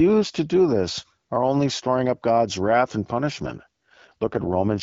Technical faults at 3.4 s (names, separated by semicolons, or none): AMR rate drop